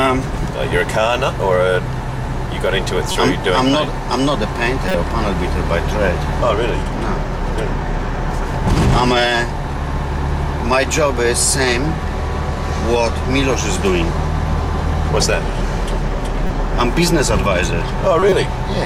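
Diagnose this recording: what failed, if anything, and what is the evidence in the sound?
The fault is at the codec: corrupt frame decoded. Brief bursts of misplaced sound occur at 3.10–3.16 s, 4.88–4.95 s, 16.47–16.56 s and 18.19–18.32 s, the last longest and loudest. The decoder played frames with flipped bits, so misread gains and codes put energy at wrong frequencies.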